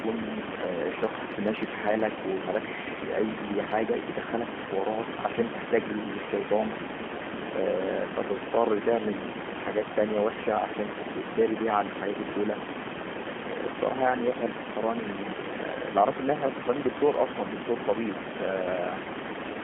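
G.729 codec damage runs from start to finish. The speech has been rebuilt from a compact model rather than carried as a waveform: a filter standing in for the vocal tract, a pitch predictor, and a handful of pulses per short frame. The roughness points to a low-rate variant around 8 kbit/s. The result is plainly audible, a slightly buzzy, synthetic edge on every phrase, within a narrow 200 Hz to 3.4 kHz line band.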